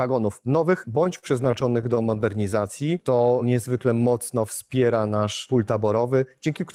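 A run of sixteen small hitches between 0.95 and 2.24 s makes the audio drag and catch, with the longest single hold lasting 40 ms. This is repeated stalls (stutter): packets kept reaching the receiver late, so its jitter buffer emptied over and over, and each time it held on to the last sound until fresh data turned up. About 188 ms of concealment fills roughly 15 % of that stretch, yet nothing is actually lost. From 2.83 to 3.74 s the sound is stretched out, running at 91 % of normal speed while the pitch stays put, so it feels drawn out. That is a jitter buffer slow-down: with its reserve running short, the receiver repeated single pitch periods or slivers of pause many times in a row, adding 93 ms to rebuild the buffer. Near the end, from 5.83 to 6.27 s, the opposite happens. The audio rushes ahead at 113 % speed, still at unchanged pitch, and sounds hurried. This jitter buffer speed-up comes from the buffer holding more audio than its target, so the receiver trimmed out short pieces of a pitch period or so, one after another, removing about 70 ms to bring the delay back down.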